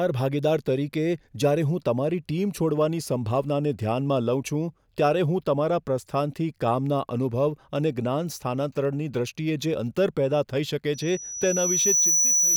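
Loudspeaker feedback squeal from 10.94 s to the end: the microphone picks up its own loudspeaker, and a 5.9 kHz tone swells over about a second above the speech.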